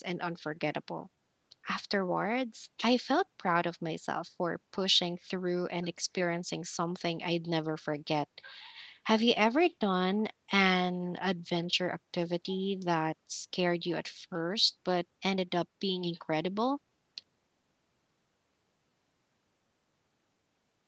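A speech clip whose tempo feels slightly unsteady from about 0.48 s to 20.34 s, with small hiccups at uneven intervals where brief fragments seem to stutter or hang for an instant. These are repeated timing corrections. The receiver keeps inserting short repeated pieces, all in the same direction, so the stretch plays at about 99 percent speed and picks up roughly a third of a second of extra material overall. The cause is clock drift between sender and receiver. The sending device's audio clock appears to run about 1.5 percent slow compared with the receiver's, so the jitter buffer keeps draining. To avoid running dry, the receiver pads the stream with these repeats, and the drift lasts the whole clip, so the corrections recur throughout. The Opus call path also limits the audio to nothing above 8 kHz, which is normal for this kind of call.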